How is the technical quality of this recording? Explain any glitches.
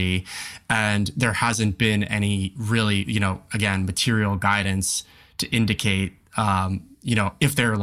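Nothing stood out on listening to this recording; there are no glitches to explain.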